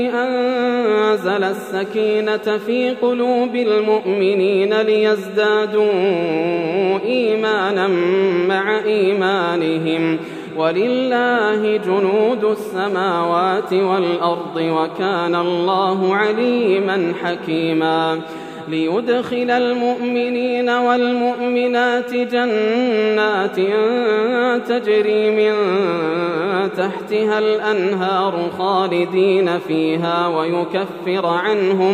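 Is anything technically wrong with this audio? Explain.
No, no technical faults detected.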